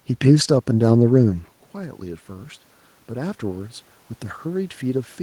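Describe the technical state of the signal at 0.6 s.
At 0.6 s the signal is intact, with only the ordinary background noise of the room audible beneath the speech.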